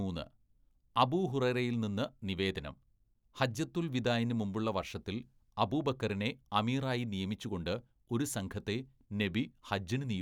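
No technical faults can be heard anywhere in the speech. Nothing in the recording calls for a timestamp or an explanation.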